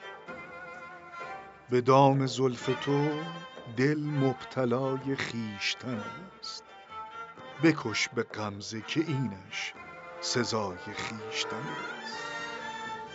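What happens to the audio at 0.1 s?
Nothing goes wrong at 0.1 s; the audio plays through that moment without any dropout, click, distortion or other fault.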